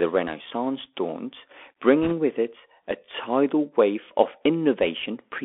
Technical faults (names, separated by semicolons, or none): Bluetooth CVSD headset codec; bit errors on a Bluetooth voice link